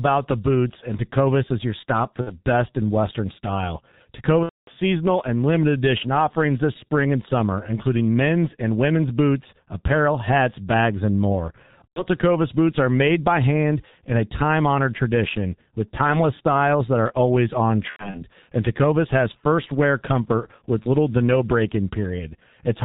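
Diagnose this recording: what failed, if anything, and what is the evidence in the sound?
The codec stage is at fault throughout. The speech is muffled and hoarse with smeared consonants and nothing above 4 kHz, which fits G.723.1 at about 6.3 kbit/s. Its 30 ms frames and slowly updated voice model blur fast articulation heavily.

The network stage shows VoIP packet loss concealed by the speech codec at 2.21–2.34 s, 4.43–4.71 s, 11.89–12.05 s and 17.90–18.21 s. In each gap the decoder repeats its last pitch and filter with falling gain, which produces a fading buzzy or noisy fill that is muted from the third lost frame in a row. The gap is longest around 4.4 s, where about 240 ms is missing, so most of it falls silent. The last event is broken up, with a run of at most 90 ms. Speech stays weak briefly afterwards.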